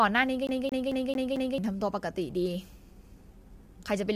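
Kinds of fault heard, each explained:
Low-delay AAC compression: The speech sounds rough and grainy throughout, with noise filling the gaps between harmonics and a thin, synthetic top band. This is likely a low-delay AAC coder at a low bitrate, around 32 kbps. Its short frames blur pitch detail, which sets it apart from plain band-limiting.
CD stuck on one turn: From 0.47 to 1.58 s, the same 0.22 s slice of speech repeats about five times, with a brief mute at each jump back. That evenly timed, mechanical stutter marks a skipping disc rather than irregular network dropouts.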